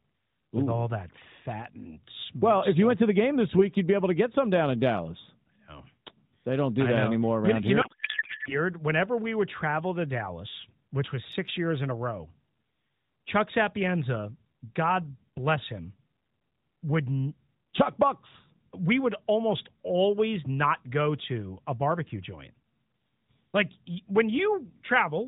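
From 7.82 to 8.58 s a codec payload misread turns the speech into garbled, warbling noise that barely tracks it. The narrowband AMR decoder is parsing frames with misplaced fields, which fits octet-aligned packets being read as bandwidth-efficient.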